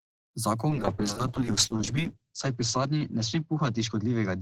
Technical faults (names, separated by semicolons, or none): call bitrate drop